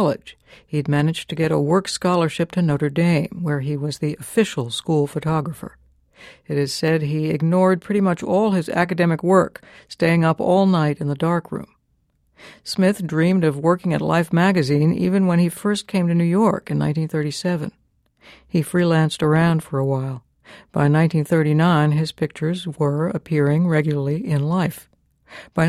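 A speech recording with a regular click that recurs every 2.65 s from 1.58 s, just after "managed to get a", through 25.41 s, about ten in all. This pattern of clock drift buffer slips most likely comes from two devices running on independent clocks about 70 ppm apart. The buffer between them gradually over- or underfills until a few samples are dropped or repeated, and each such discontinuity in the waveform is heard as a click.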